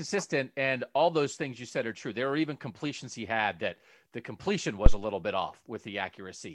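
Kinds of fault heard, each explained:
Phantom power thump: a supply being switched on a live input, with the voltage step passing through the coupling capacitors as a low-frequency transient. In this speech clip it lands between "had that the completion" and "little bit", at 4.86 to 4.99 s, as a deep thump peaking at about -3 dBFS, close to full scale. Its decay is short, about 29 ms, so the disturbance dies away quickly rather than ringing on.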